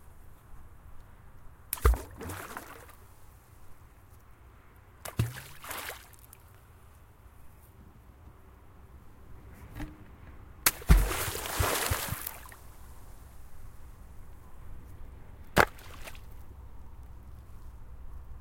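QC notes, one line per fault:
Throughout: sample clock jitter. The converter's clock wanders by a few microseconds, so each sample is taken at a slightly wrong moment. The error is proportional to the rate of change of the waveform, so it sits roughly 20 dB below the signal and follows it. It is heard as hiss and roughness that rises on loud and high-frequency sound and disappears in silence.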